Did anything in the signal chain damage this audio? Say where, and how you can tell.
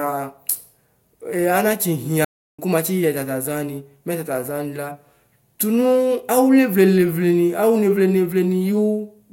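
Yes. Playback stage: the speech cuts to silence from 2.25 to 2.59 s, then resumes. This is a playback stall, likely from a starved or blocked player.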